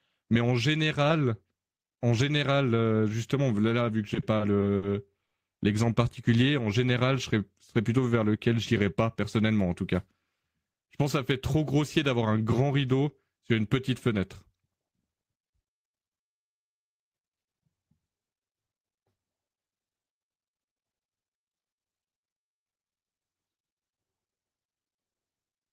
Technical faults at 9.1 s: jitter buffer speed-up

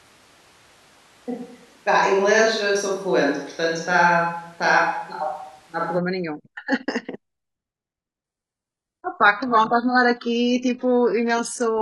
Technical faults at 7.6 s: none

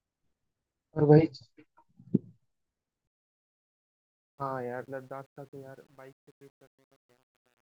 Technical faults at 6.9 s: truncation distortion on a fade

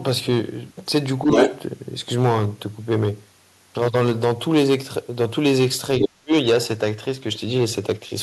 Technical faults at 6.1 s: hard clipping; other side's voice leaking through; speech suppressed in double talk

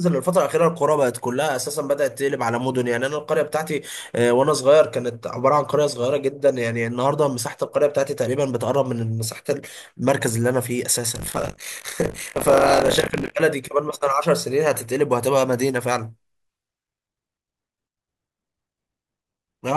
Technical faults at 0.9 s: none

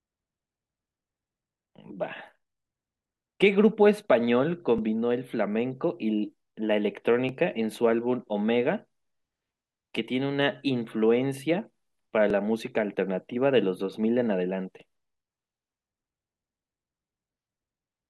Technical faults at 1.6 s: none

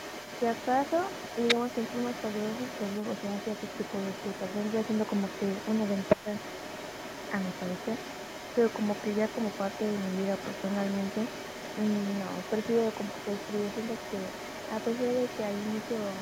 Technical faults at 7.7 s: other side's voice leaking through

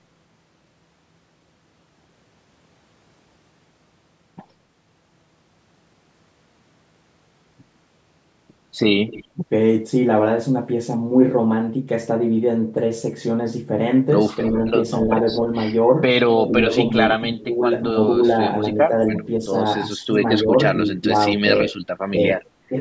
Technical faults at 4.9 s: none

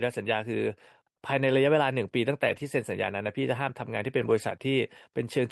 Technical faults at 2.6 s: lost packet rebuilt from error correction

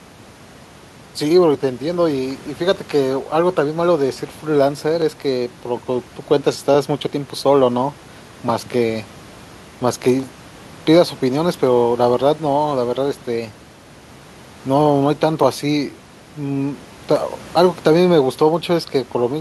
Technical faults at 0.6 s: none

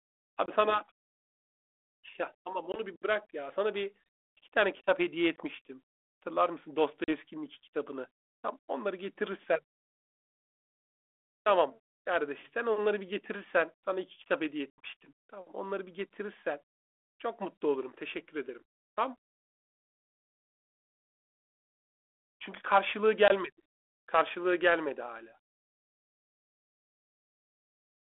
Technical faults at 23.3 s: packet loss on an ADPCM call

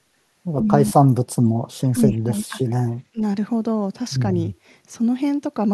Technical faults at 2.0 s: speech suppressed in double talk

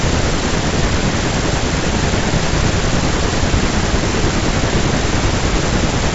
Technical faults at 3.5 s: none

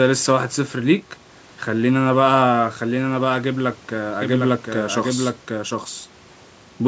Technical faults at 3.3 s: none

